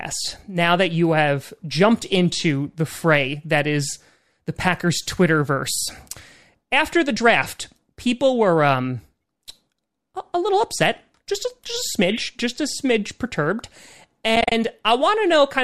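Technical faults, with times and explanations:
14.36–14.52 s, AAC frame loss with muting: about 100 ms of sound drops out in several short gaps spread over 160 ms, the longest around 40 ms. This fits ten or so short frames being zeroed, likely from the low-delay AAC-ELD stream. Overlapping windows fade each gap in and out. On a spectrogram these appear as narrow full-band blank columns with soft edges, and on the waveform as tapered dips to silence.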